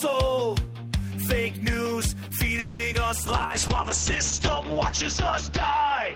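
Call audio freeze, 2.59 to 2.81 s: the last sound before 2.59 s is stretched into a synthetic buzz or hiss for about 200 ms, fading but never reaching silence. Then the audio resumes exactly where it left off. The likely cause is packets held up in transit, which emptied the jitter buffer and forced the receiver to invent sound until they arrived. Nothing is lost, but everything after 2.81 s now plays about 200 ms later than before.

Short concealed packet loss, 2.93 to 2.96 s: about 20 ms of audio failed to reach the decoder in time. The receiver patched roughly 10 ms of the hole by extending the preceding sound, pitched or noise-like, before blending back into the real signal. The result is a quick smear or wobble lasting about 30 ms.

Call bitrate drop, from 3.26 s to the end: the call's bandwidth estimate collapsed, so the encoder was told to fall from 40 kbps to 8 kbps. It stays at that floor for about 2.1 s. 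At so few bits Opus codes coarsely and narrows the audio bandwidth from 20 kHz to 8 kHz. The sound turns muffled, with a rough, watery texture, and it does not recover before the end.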